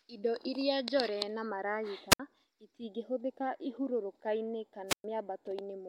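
A wireless microphone squelch dropout occurs twice, at 2.10–2.20 s and 4.88–5.04 s, as the FM signal fades: hiss rises briefly, then muted holes of about 64 ms and 114 ms cut the speech.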